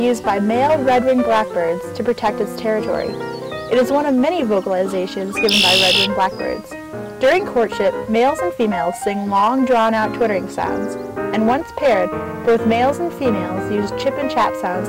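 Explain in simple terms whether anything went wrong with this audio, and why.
Hard clipping runs through the whole clip. The audio was pushed well past what the recording chain could carry, so its loudest peaks, a small share of the signal, were sliced flat. Those squared-off tops add a harsh, crackly fuzz whenever the sound gets loud.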